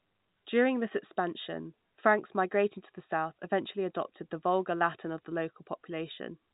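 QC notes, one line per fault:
The speech carries the band-limited sound of G.711 telephone coding, with nothing above about 3.8 kHz, and no fault appears anywhere in the signal.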